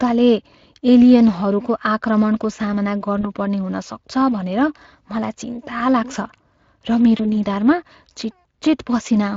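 Throughout, the speech carries plainly audible Speex codec damage, a CELP coarseness and grain consistent with a mid-range bitrate near 21 kbps. At 3.21–3.27 s and again at 7.17–7.26 s, VoIP packet loss concealed by the speech codec appears: the decoder extends its last pitch and filter over a missing 20 ms stretch, producing a brief fading smear that lingers as the following frames recover.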